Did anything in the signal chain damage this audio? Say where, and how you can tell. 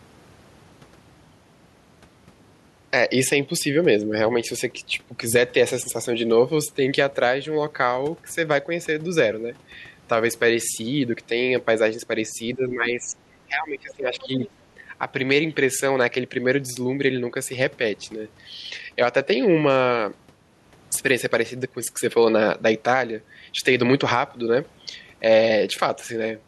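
Yes, at the call-processing stage. From 12.55 to 13.17 s and again from 13.47 to 14.43 s, the speech dips by about 10 dB and then about 15 dB. This is likely speech suppressed in double talk, with the echo canceller ducking everything. On a waveform, the envelope visibly shrinks.

Also in call processing, from 14.21 to 14.5 s a faint second voice sits under the talker, about 20 dB down. This is likely the other side's voice leaking through as residual loudspeaker echo the canceller failed to remove. On a spectrogram, weak harmonic stripes overlap the main speech.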